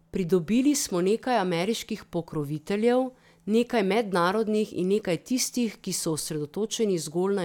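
No faults can be heard anywhere in this speech recording.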